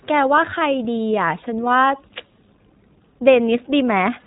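From start to finish, the speech has the sound of the iLBC codec. Everything above about 3.8 kHz is gone, so the audio is narrowband and muffled, like a phone line. The coding damage is plainly audible. Voiced sounds come out slightly rough and synthetic. The codec rebuilds each 20 ms frame on its own, and the result matches a 15.2 kbps stream.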